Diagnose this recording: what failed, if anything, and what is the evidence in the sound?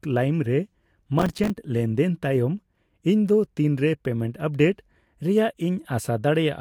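Processor overload crackle at the driver and buffer stage, from 1.19 to 1.5 s: a run of tiny hard-edged silent gaps, each around 5 ms, about fifteen of them packed together, tearing at the speech. Unlike one clean dropout, it is a dense gritty cluster that clears once the load eases.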